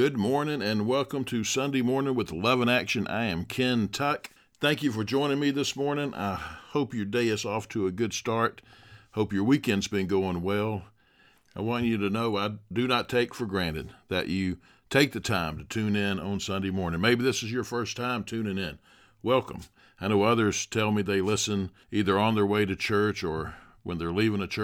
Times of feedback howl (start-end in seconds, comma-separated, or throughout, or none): none